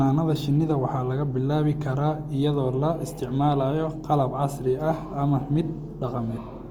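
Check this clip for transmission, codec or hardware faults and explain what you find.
One codec fault runs through the whole clip: likely Opus compression. The encoder appears to be in its CELT music mode at a starved bitrate; the damage fits roughly 24 kbps. Instead of dropping bands, CELT keeps each band's energy and fills the missing detail by folding lower bands upward or injecting noise. The bandwidth stays full, reaching about 20.1 kHz, but the speech sounds plainly rough and grainy, with a noisy texture.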